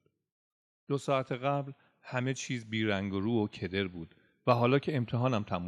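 From 0.86 s to 5.54 s, automatic gain rising: the gain control judged the input too quiet and pushed its gain up by about 8 dB. The speech and the background noise swell together, slowly, across almost the whole clip.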